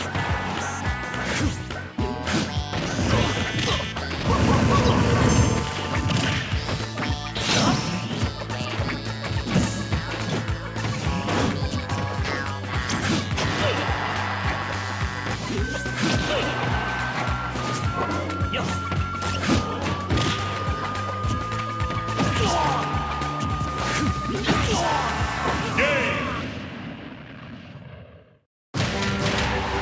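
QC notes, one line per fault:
Nothing to flag here; I listened all the way through and didn't hear a single fault.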